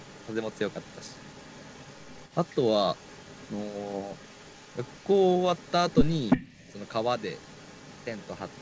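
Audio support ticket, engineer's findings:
Echo leak, 0.0–2.7 s, 2.93–5.18 s, 5.35–5.72 s, 5.9–8.61 s. A faint delayed copy of the speech trails the direct signal by about 339 ms, about 30 dB down, almost continuous across the clip. Likely cause: the far end's loudspeaker playback reached its microphone and the echo canceller did not fully remove it, so the residue was sent back. The band-limited sound, nothing above 8 kHz, fits the G.722 call path.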